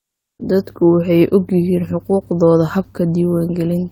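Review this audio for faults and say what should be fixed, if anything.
From 0.00 to 0.39 s there's comfort noise in place of the background: flat, featureless hiss about 25 dB quieter, likely Opus DTX filling the pause. Switching DTX off at the sender keeps the real background.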